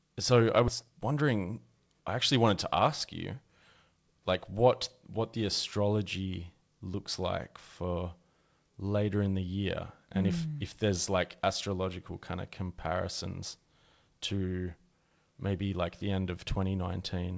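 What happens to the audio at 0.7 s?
A skip ahead occurs at 0.68 to 0.70 s. Around 0.7 s of audio was dropped while later audio was already waiting. Playback jumps straight forward with no gap. The two sides of the missing stretch are joined almost directly.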